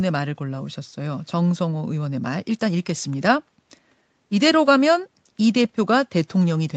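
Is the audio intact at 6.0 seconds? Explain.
Yes, at 6.0 seconds the speech is intact, with no fault at that moment.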